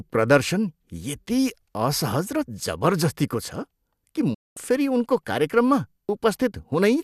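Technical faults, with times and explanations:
4.34–4.57 s, digital broadcast dropout: the speech fades out over about 8 ms and stays silent for roughly 216 ms. The receiver muted after losing the signal or rejecting corrupted frames, consistent with about nine frames discarded, and that stretch of programme is gone.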